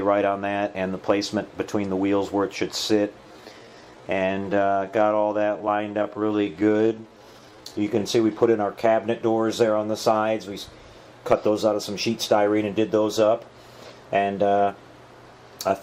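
From 3.17 to 8.03 s, a time-stretched section slows sound to 0.69 speed, so it drags; unlike tape slowdown, pitch holds, likely from length-fitting software.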